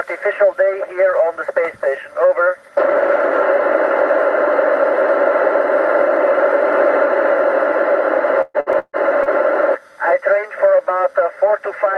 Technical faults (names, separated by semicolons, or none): repeated packet loss (robotic sound)